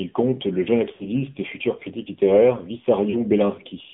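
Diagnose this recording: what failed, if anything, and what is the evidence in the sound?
The whole clip has been through the AMR narrowband mobile codec, the speech coder used on 2G and 3G calls. The band sits between roughly 150 Hz and 3.6 kHz, with nothing above that, and the voice has that plainly audible buzzy, synthetic edge you get when a vocal-tract model driven by sparse pulses stands in for the real waveform. The coarseness fits a low-rate mode around 7.4 kbps.

There are also lost AMR speech frames, a radio-link or network fault at two points. From 0.94 to 1.06 s, right after "compte le jeune" and before "et futur critique littéraire", the sound smears and sags for about 60 ms, consistent with three 20 ms frames failing. At 3.10 to 3.24 s, after "et futur critique littéraire", there's a shorter dropout of about 40 ms, fitting two frames. In both places the decoder carried the last good pitch and spectral settings forward at falling gain.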